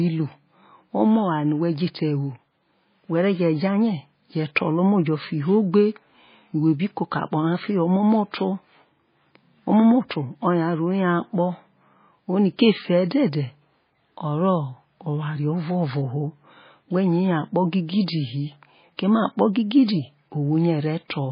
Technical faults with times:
0.00-21.32 MP3 compression

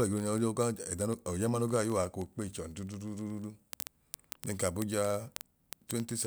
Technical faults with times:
0.11-6.27 word clock ticks

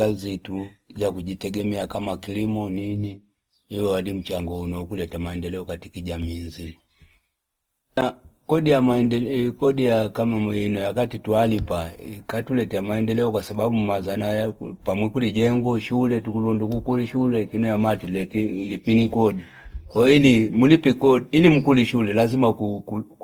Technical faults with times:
0.00-23.23 Opus compression

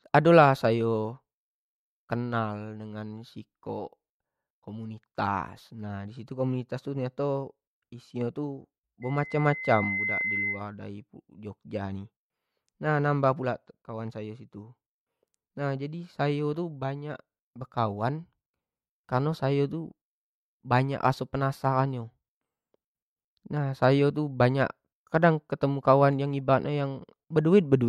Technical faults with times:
9.02-10.67 loudspeaker feedback squeal

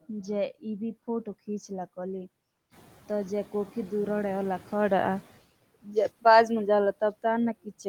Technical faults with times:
0.00-7.88 noise suppressor artifacts
5.83-6.25 speech cut by the noise suppressor
7.53-7.86 speech cut by the noise suppressor

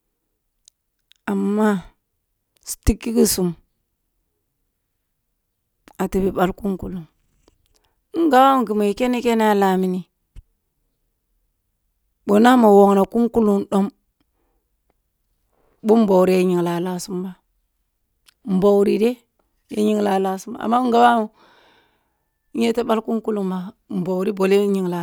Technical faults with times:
none

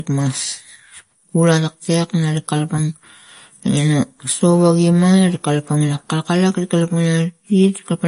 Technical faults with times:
0.00-8.07 MP3 compression
0.12-8.04 clock slip clicks

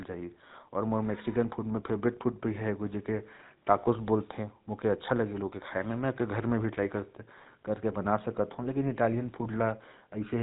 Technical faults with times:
0.00-10.42 GSM full-rate codec

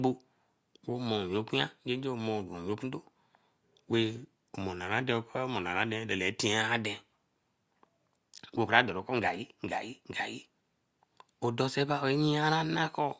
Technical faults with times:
none

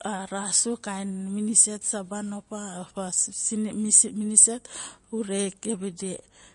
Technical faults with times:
0.00-6.54 MP3 compression

